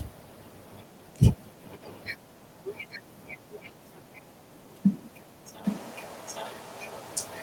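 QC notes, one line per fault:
2.90–2.99 s, 3.51–3.70 s and 5.63 s to the end: echo leak. A faint copy of the speech returns 816 ms late, roughly 20 to 25 dB below it. Two brief scraps come first, then a sustained trail. The likely cause is a far-end loudspeaker whose echo canceller let the pickup through.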